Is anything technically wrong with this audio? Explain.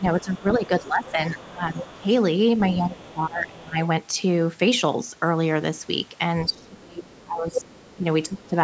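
Yes. Speech suppressed in double talk appears from 0.0 to 2.07 s, 2.76 to 3.78 s and 6.48 to 8.54 s. With both sides talking, the echo canceller likely mistook the talker for loudspeaker echo and turned everything down. The voice dips in pieces, by about 15, 20 and 25 dB at its deepest.

The other side's voice leaking through appears from 0.2 to 2.01 s, 3.03 to 3.13 s and 6.5 to 7.95 s. The canceller likely left part of the loudspeaker playback in the microphone signal, so a faint second voice sits about 20 to 25 dB below the speech.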